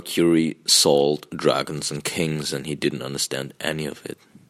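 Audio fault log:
1.98 s, dropped samples: roughly a single sample goes missing from the speech, so the waveform jumps straight from one value to a later one. The gap is far too brief to take away any sound. Instead the abrupt step likely produces one sharp click, seen as a thin vertical line across the spectrum.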